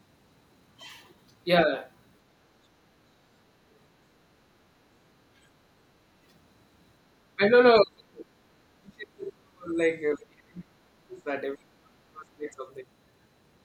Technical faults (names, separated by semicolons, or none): speech suppressed in double talk; other side's voice leaking through